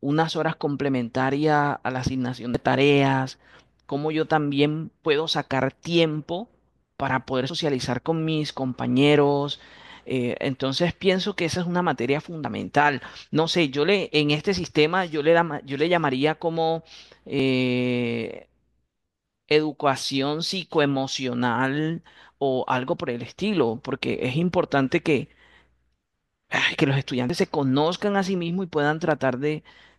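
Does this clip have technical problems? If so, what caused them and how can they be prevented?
Yes. Audio missing between chunks: the recorder likely loses a short piece at each 5-second chunk handover, causing abrupt skips of roughly 50 ms at 2.55, 7.50, 12.45, 17.40 and 27.30 s. Opening the next chunk before closing the current one, with overlapping or double buffering, prevents these gaps.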